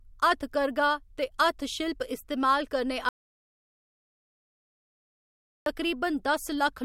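At 3.09 s, right after "ते हत्थशिल्प इस्तेमाल करने", the speech cuts off into an audio dropout to silence lasting until 5.66 s. The waveform flatlines and the spectrogram goes blank for about 2.57 s, with no room tone, likely from the input being lost while recording continued.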